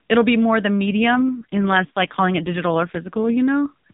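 Just after "it'll be more the", at 0.87 s, an AMR rate drop begins. The speech turns rougher and buzzier, fitting a fall from 12.2 to 4.75 kbps, until 3.37 s.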